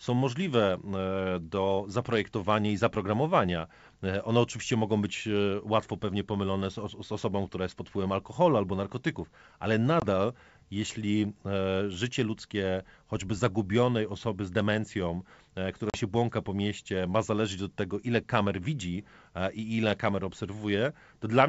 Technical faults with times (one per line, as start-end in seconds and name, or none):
10.00-10.05 packet loss on an ADPCM call
15.90-15.98 packet loss on an ADPCM call